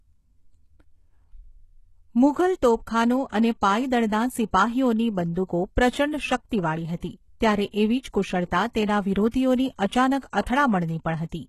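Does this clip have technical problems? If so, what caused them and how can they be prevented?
Yes. HE-AAC compression runs throughout the speech. The treble is likely rebuilt by band replication, sounding gritty and metallic, with nothing above 12.3 kHz. This fits roughly 16 kbps. Prevent it by encoding at a higher bitrate or with plain AAC.

Pre-echo smears three attacks. A short hiss precedes "અને પાયદળના" at 3.29 to 3.32 s (37 ms) and "એવી જ કુશળતા" at 7.70 to 7.74 s (32 ms). A third occurs at 10.41 to 10.46 s (52 ms). Block-spread quantisation noise leaks before each onset. Prevent it with more bits or a codec that switches to short blocks on transients.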